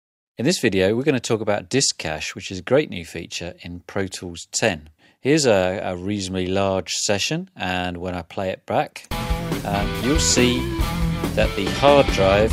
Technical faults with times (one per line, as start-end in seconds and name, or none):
none